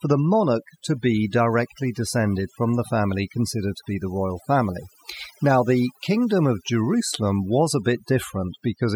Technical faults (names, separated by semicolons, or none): overdone noise removal